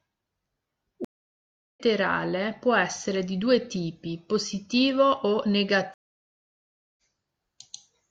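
At 1.05 s the speech cuts out for 0.71 s in a stream reconnect. The connection dropped, then a fresh decoder rejoined mid-stream. Sound resumes at 1.80 s, about half a second further on. At 5.94 s it happens again: about 1.04 s of silence, resuming at 7.01 s roughly one and a half seconds later.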